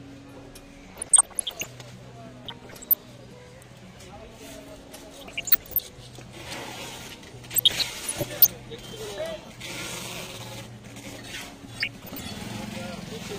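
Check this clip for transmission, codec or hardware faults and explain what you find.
Two faults are present: DAB burbling and short pieces of audio missing between chunks.

DAB burbling occurs at 0.83–1.66 s, 2.43–3.20 s, 5.11–5.80 s, 7.51–8.50 s and 11.78–12.25 s. Under weak reception, residual bit errors corrupt MP2 samples and scale factors: wrong samples produce short blips of noise in single sub-bands, and wrong scale factors make sub-bands jump in level for up to a frame.

Audio goes missing between chunks at 1.38, 3.33, 5.28, 7.23, 9.18, 11.13 and 13.08 s. The regular spacing of about 2 s points to chunked recording or processing as the likely cause. Roughly 50 ms is dropped at each changeover, and the two sides are butted together, giving brief, periodic skips.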